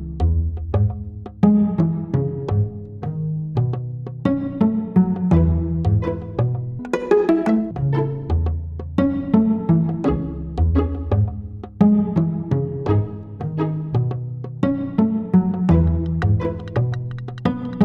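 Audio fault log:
6.79 to 7.71 s, section at the wrong speed: for just under a second the sound lurches upward and rushes, everything racing at twice its normal rate and sitting about ten semitones higher, then snapping back to normal pitch and pace. Because speed and pitch climb together and abruptly, the passage was likely played out against the wrong clock, so its samples ran through at double rate rather than being pitch-shifted on their own.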